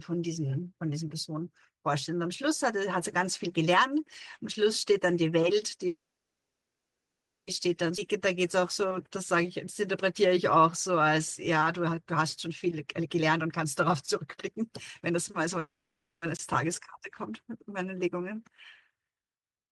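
From 5.87 to 7.48 s the speech halts, a brief buzz of the last sound fading into about 1.5 s of silence before resuming where it stopped. This is a call audio freeze, likely from delayed packets draining the jitter buffer, which inserts 1.6 s of gap with nothing lost.

At 7.97 s the speech jumps forward with almost no break, roughly a second of it gone and the two sides butted together. This skip ahead happened because a stretch of audio was dropped while later audio was already waiting, shedding that built-up delay.

From 7.99 to 12.04 s the speech drags at 94% speed, pitch unchanged and sounds slightly drawn out. This jitter buffer slow-down repeated pitch periods, adding 251 ms to rebuild a reserve.

From 12.13 to 15.47 s the speech then runs hurried at 114% speed, same pitch. This jitter buffer speed-up trimmed roughly half a second of pitch periods to cut excess buffered delay.

From 15.59 to 16.23 s comes a second call audio freeze: a short fading buzz, then about 390 ms of silence. 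Stalled packets likely starved the buffer again, inserting 630 ms with nothing missing.

At 16.37 to 16.39 s a 20 ms block of digital silence cuts in abruptly, where the output buffer apparently went unfilled in time.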